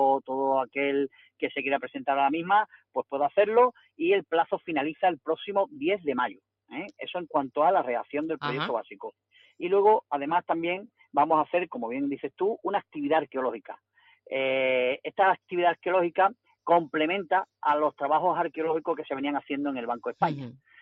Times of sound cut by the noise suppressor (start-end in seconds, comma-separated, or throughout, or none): 1.11-1.42